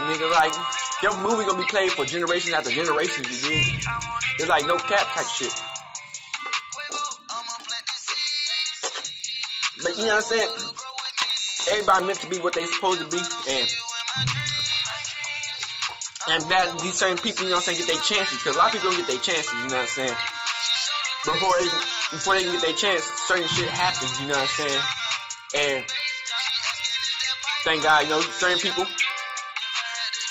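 Throughout, faint ticks repeat 10 times per second, only while signal is present. This is a resampler restarted on every block. Each 100 ms block was converted alone, which fits 16 kHz to 48 kHz, so every block edge carries a small error.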